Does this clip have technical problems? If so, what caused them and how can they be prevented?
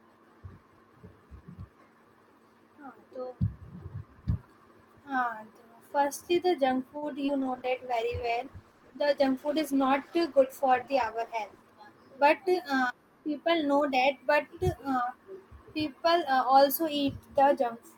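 Yes. At 6.97 to 7.04 s, a short stall from a late packet emptied the jitter buffer, so the receiver held the last sound for about 47 ms before resuming without losing anything. A slightly deeper jitter buffer target would absorb that lateness.

From 7.26 to 7.44 s, short concealed packet loss dropped about 40 ms of audio, which the decoder patched by extending the preceding sound, leaving a brief smear. Forward error correction or redundant packets would let the receiver rebuild the missing audio instead of guessing.

A call bitrate drop from 7.42 to 11.68 s cut the encoder from 64 to 14 kbps for about 4.2 s, making the sound coarse and dull with its highs trimmed. Steadier network capacity, or a higher bitrate floor in the congestion controller, would keep the audio clearer through such dips.

At 11.56 to 11.93 s, a jitter buffer speed-up trimmed roughly 40 ms of surplus delay, playing the sound about 9 percent faster at unchanged pitch so it seems hurried. 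Spreading that catch-up over a longer stretch would make the acceleration much less noticeable.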